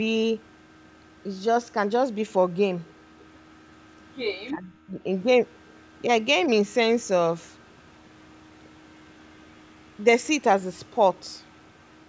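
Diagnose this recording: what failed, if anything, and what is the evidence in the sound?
Speech suppressed in double talk, from 4.5 to 5.0 s: the speech drops by about 30 dB for half a second, then recovers. This is in the call processing stage, likely an echo canceller mistaking the near talker for loudspeaker echo during overlapping talk and attenuating both.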